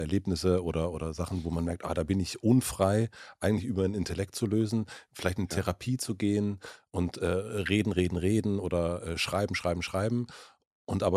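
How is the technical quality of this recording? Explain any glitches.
No technical faults are audible.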